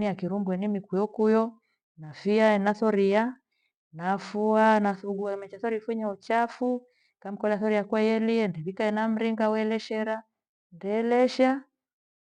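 No technical faults can be heard in the signal, which carries the speech through the whole recording without any audible disruption.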